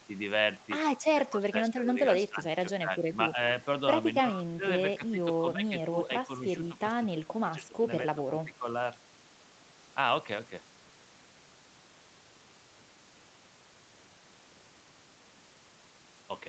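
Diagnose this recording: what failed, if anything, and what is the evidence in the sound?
Call processing: speech dips by up to about 15 dB at 1.12–2.44, 2.79–3.36, 4.32–4.63, 4.98–6.3 and 7.12–8.66 s, likely speech suppressed in double talk as the echo canceller ducks everything.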